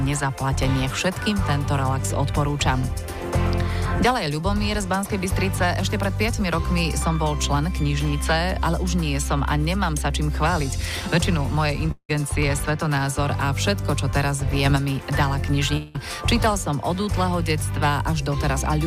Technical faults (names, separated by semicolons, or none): long network dropout; sudden gain jump